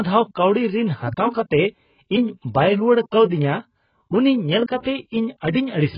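Throughout the speech, nothing reaches above 5.1 kHz, and the remaining band sounds dull, smeared and warbly, with heavy damage consistent with AAC compression, likely AAC-LC at a very low bitrate, which fits roughly 12 kbps, where the encoder cuts the top band and starves the rest.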